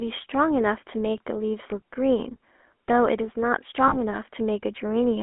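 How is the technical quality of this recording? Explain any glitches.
The recording has audible technical problems: codec damage throughout and one brief dropout.

GSM full-rate codec, throughout the clip: the speech passes through the first-generation GSM coder, which fits a 13 kbps stream. It models the vocal tract and drives it with a coarse pulse excitation, keeping only a fraction of the original detail. The band is limited to roughly 250 Hz to 3.4 kHz, so the speech sounds thin and narrow, with a plainly audible buzzy, gravelly roughness.

Lost GSM frames, from 3.88 to 3.97 s: about 40 ms of coded audio went missing, which fits two lost 20 ms frames. The decoder concealed the gap by reusing the settings of the last good frame. Instead of a clean gap, the sound briefly freezes into a rough, metallic ring before normal speech returns.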